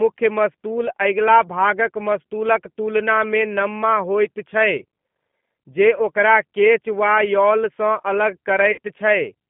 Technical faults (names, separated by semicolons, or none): G.729 codec; VoIP packet loss concealed by the speech codec